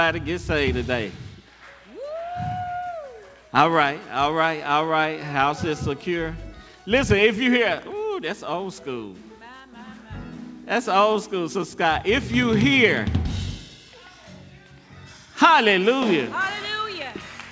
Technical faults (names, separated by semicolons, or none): none